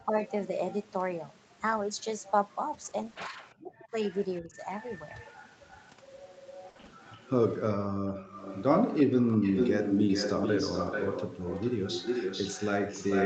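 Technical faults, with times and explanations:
2.73–3.39 s, repeated packet loss (robotic sound): three short holes, the longest 20 ms, add up to 60 ms, each patched by stretching the previous sound. Because the holes are brief and sparse, only about 9% of the stretch is concealed. The result is a choppy flicker with small pieces missing.
3.50–3.54 s, echo leak: a faint copy of the far side returns about 342 ms late at about 35 dB below the speech. A loudspeaker-to-microphone path that the echo canceller did not fully clear is the likely cause. The fixed delay marks it as echo, not reverb.
3.55–4.57 s, speech suppressed in double talk: while both sides talk, the speech dips, at worst falling roughly 40 dB, for about half a second in total. The likely cause is the echo canceller mistaking the talker for loudspeaker echo. Unlike packet loss, nothing is smeared or repeated.
4.69 s, lost packet rebuilt from error correction: one 20 ms packet went missing and was replaced by the low-bitrate copy carried in the next packet. 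There is no gap or robotic tone, only a brief rougher, noisier grain.
4.96–7.3 s, echo leak: the delayed copy returns, again about 342 ms behind, now much stronger at about 20 dB below the speech. It lasts over two seconds, so the canceller was likely not converging on the loudspeaker path. The repetition at a steady lag distinguishes it from room reflections.
6.69–6.93 s, repeated packet loss (robotic sound): five holes totalling 140 ms, the longest 60 ms, cover 58% of this short stretch. The patched sound becomes choppy, with pieces missing.
8.08–8.12 s, speech suppressed in double talk: a brief dip of roughly 10 dB lasting about 40 ms while the other side is active, likely the canceller ducking the talker. It is a level drop, not a dropout or distortion.
8.27 s to the end, echo leak: a strong echo at about 5 dB below the speech arrives 438 ms late. The longer delay shows the echo path shifted, and the level makes it almost a second voice. 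The likely cause is the canceller failing to track the new path.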